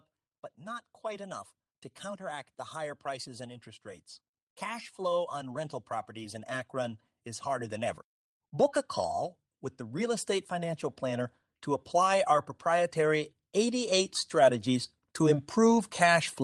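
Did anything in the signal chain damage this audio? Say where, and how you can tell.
Yes. Automatic gain rising at 4.6–8.83 s and 11.91–14.95 s: call-processing AGC slowly lifts speech and background together, by about 6 dB then about 5 dB.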